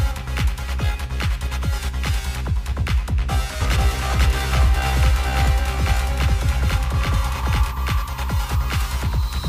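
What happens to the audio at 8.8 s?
Nothing goes wrong at 8.8 s; the audio plays through that moment intact, with no dropout, click or distortion.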